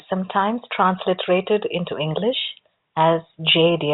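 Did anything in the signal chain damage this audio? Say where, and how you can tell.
No: the speech has gone through a G.711 A-law telephone path at 64 kbps, which limits the band to 4 kHz and leaves at most a faint quantisation hiss that follows the level, and no stage in the chain has added damage beyond that.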